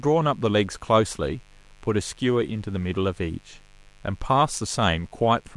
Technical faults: mains buzz

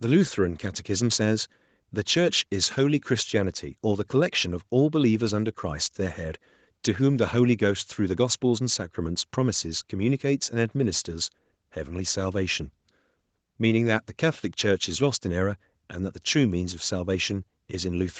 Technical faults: none

